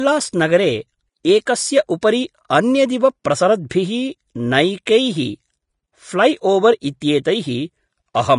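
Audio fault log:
throughout: Vorbis compression, likely at a low bitrate near 33 kbps. The speech sounds hissy and grainy, and the spectrogram shows a hard ceiling at 10.5 kHz with speckled treble beneath it.
1.45 s, 2.01 s, 3.24 s, 3.69 s, 4.85 s: pre-echo. A short hiss of 10 to 17 ms smears ahead of each sharp onset, seen as noise rising before the waveform attack.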